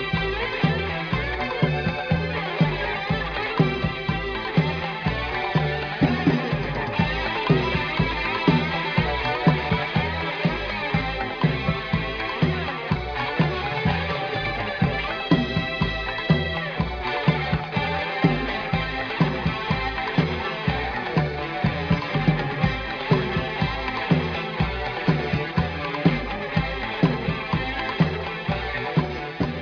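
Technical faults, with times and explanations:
No technical faults detected.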